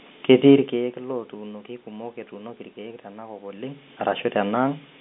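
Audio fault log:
No technical fault can be heard: the speech sits in the telephone band of roughly 200 Hz to 3.6 kHz typical of G.711 A-law line coding, with room noise underneath and level shifts near 0.5 s and 3.5 s that come from the talker moving relative to the microphone.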